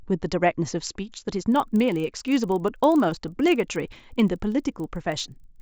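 Speech clip, and from 1.52 s to the end there's a steady 25 Hz ticking riding on the signal, the classic sign of a resampler restarted on every block. Each 40 ms chunk gets converted without its neighbours, so every block edge picks up a small error.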